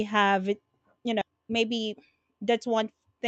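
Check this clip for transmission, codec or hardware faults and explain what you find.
Two faults occur in the speech, one close after the other.

At about 1.21 s there is a skip ahead. Roughly 0.7 s of audio never plays. A block was dropped while later packets were already queued, and playback resumed on those without inserting any fill. The two sides of the cut are spliced almost directly, so the speech lurches forward abruptly with no audible gap. The lost stretch simply isn't there.

From 1.78 s to 2.18 s there is a jitter buffer speed-up. With more audio queued than its target, the receiver repeatedly trimmed short pitch-period segments, removing around 70 ms in total. Playback runs at about 114% speed over that stretch while the pitch stays unchanged, so the talker sounds briefly rushed. The timing compresses, but there is no chipmunk shift. Across the clip the Opus call path limits the bandwidth to about 8 kHz.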